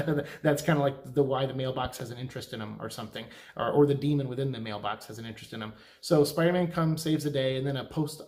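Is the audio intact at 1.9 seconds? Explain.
No. A loud pop, two in quick succession, sits over the sound from 1.85 to 2.03 s. It peaks a few decibels above the signal. A sudden voltage pulse, likely from a plug or switch, is the cause.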